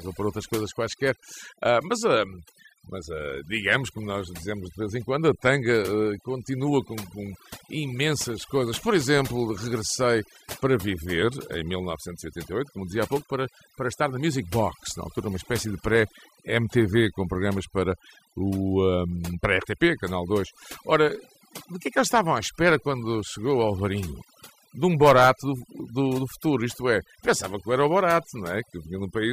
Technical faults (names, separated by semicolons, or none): overdone noise removal